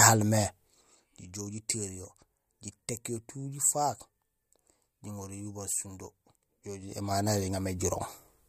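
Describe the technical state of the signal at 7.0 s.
Zipper noise runs from 6.78 to 7.15 s, so 7.0 s falls in the middle of it. The level is being changed in unsmoothed jumps of about 3 dB, at roughly ten steps a second, adding up to a change of around 10 dB. Each abrupt jump leaves a small click in the speech, and together they form a fast ticking, zipping texture laid over the sound as the level moves.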